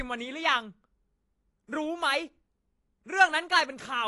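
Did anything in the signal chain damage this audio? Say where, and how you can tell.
Yes. AAC compression is audible throughout this speech, at the codec stage. Nothing reaches above 11.5 kHz, and the sound is dull and smeared, with a fizzy edge on sibilants. This likely comes from AAC-LC encoding at a low bitrate, which fits roughly 32 kbps, forcing a lowered cut-off and coarse quantisation.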